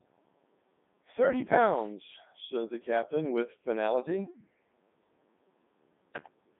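From start to finish the speech runs through a Codec 2 vocoder in its 3.2 kbit/s mode, and the damage is heavy. Only pitch, voicing, energy and a rough spectral shape survive, rebuilt from sine waves inside a 150 Hz to 3.7 kHz band, so everything comes out robotic and buzzy.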